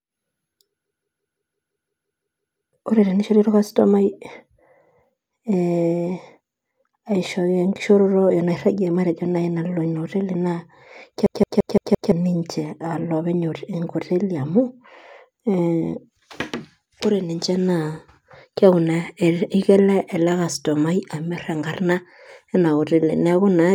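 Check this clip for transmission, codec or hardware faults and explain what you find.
The speech is interrupted twice by a system hang loop, from 0.85 to 2.73 s and again from 11.26 to 12.12 s. In each case the playback system stalled while the sound hardware kept replaying the same 0.17 s stretch of its ring buffer. That stretch length fits an 8192-sample buffer. The result is a machine-gun stutter at about 5.9 repeats per second, eleven repeats the first time and five the second. Roughly two seconds and then one second of speech are lost. Packet-loss concealment would fade and vary between repeats, but here every repeat is an identical copy.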